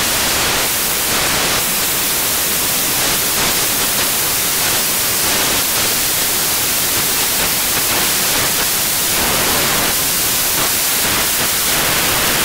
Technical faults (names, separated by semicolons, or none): samples built from the wrong bytes